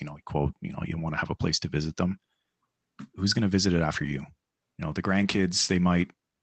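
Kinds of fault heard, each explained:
Lost packet rebuilt from error correction: after "to visit it after" (4.01 s) and "you know the" (5.21 s), about 40 ms, consistent with two lost packets, is replayed from a coarse low-bitrate backup copy. The sound continues without a gap but turns rougher. A spectrogram shows brief smeared, noisier patches there, and the waveform stays unbroken.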